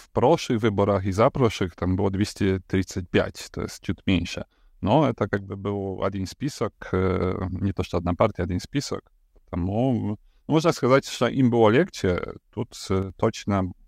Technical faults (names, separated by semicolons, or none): one channel drops out